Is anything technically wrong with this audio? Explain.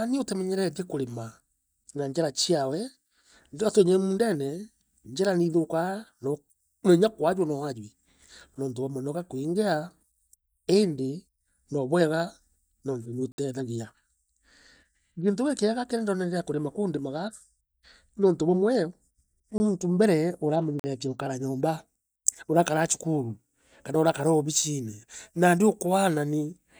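Yes. Blocks of digital silence occur at 13.32 s (60 ms), 19.58 s (20 ms) and 20.79 s (45 ms): likely the output buffer went unfilled, so speech drops abruptly to silence.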